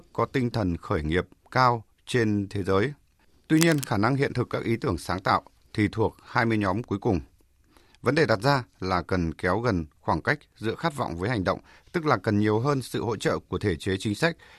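From 3.56 to 3.85 s, just before "năng hiện thực các", a burst of cable scratch noise rasps over the speech, roughly 10 dB below it. Its dense, uneven scratching sets it apart from isolated clicks or crackle, and it likely comes from a worn cable or connector being moved.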